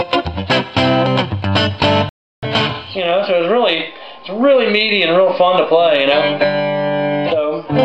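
The audio has a playback stall from 2.09 s to 2.43 s: the output drops to silence in mid-flow for about 336 ms before sound returns. The likely cause is the player running short of buffered data or its output thread being blocked until it recovered.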